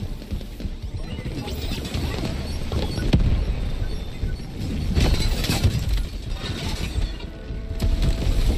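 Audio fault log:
No technical faults can be heard anywhere in the audio, and the signal stays steady and intact throughout.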